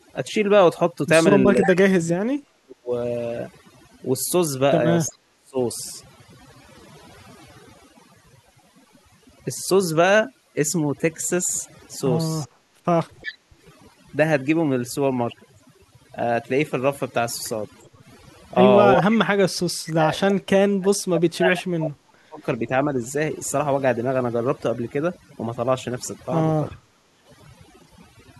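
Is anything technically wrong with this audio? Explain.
Yes. The speech carries four kinds of fault: one runs the whole way through, and three come and go.

Overdone noise removal affects the entire clip. A noise reducer set too aggressively has cut individual frequency bands down or out wherever they came close to its noise estimate. Quiet parts of the speech were removed along with the noise. The background drops, broken by small twinkling specks.

Speech suppressed in double talk occurs at 1.47 to 2.92 s, 5.1 to 5.58 s, 18.95 to 22.94 s and 26.69 to 27.06 s. The likely cause is an echo canceller that could not tell the near talker from loudspeaker echo while both sides spoke at once. It turned everything down. The voice dips, dulls or breaks into pieces. The deepest drops are about 40 dB in the first and third spans, about 30 dB in the second and about 25 dB in the last.

Echo leak appears at 1.61 to 1.71 s, 5.06 to 5.15 s and 12.41 to 13.37 s. 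A delayed copy of the voice returns 363 ms late. This is likely loudspeaker sound that the far end's canceller failed to remove, so it was sent back. The copy is about 10 dB below the speech in the first case, about 30 dB below in the second and about 15 dB below in the third. The third is the longest, nearly a second of echo.

Background gated by the echo canceller runs from 12.47 to 13.62 s, during that longest echo. While the loudspeaker played, the canceller clamped the microphone hard. The room sound drops by up to about 15 dB for well under a second in total. It returns once the canceller releases.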